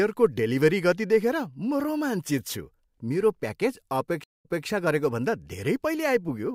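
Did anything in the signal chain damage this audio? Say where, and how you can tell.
Yes: a stream reconnect at the network stage, 4.24 to 4.66 s, right after "मेरो प्याकेज". The speech falls silent for 0.18 s, then resumes 0.24 s earlier, replaying material because the server resent a burst into a freshly restarted decoder.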